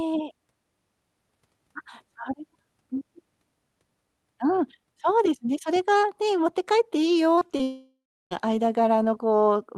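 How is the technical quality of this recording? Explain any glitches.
The recording has two connected faults near the end, both in the transmission rather than the capture. The audio is band-limited to about 12 kHz, which fits an Opus-coded call path.

From 7.35 to 7.61 s there is repeated packet loss with a robotic sound. Four short gaps, the longest 22 ms, fall close together. Each was patched by extending the preceding audio, so about 30% of that quarter-second is concealment, roughly 78 ms in total. The sound turns choppy, with small pieces missing and synthetic fill between them.

Immediately after, from 7.63 to 8.33 s, about 680 ms of audio is lost. It is most likely a long network dropout. The receiver first stretches the last sound into a decaying buzz or hiss. After that, about 340 ms is plain silence before the signal resumes. The material from that interval never returns, so the audio picks up later with a clean gap in its content.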